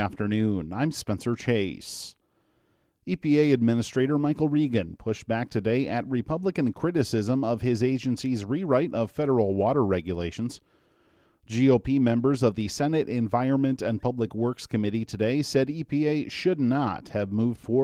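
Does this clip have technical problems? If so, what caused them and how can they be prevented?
No, this clip has no technical problems, so there is nothing to trace to a cause or prevent.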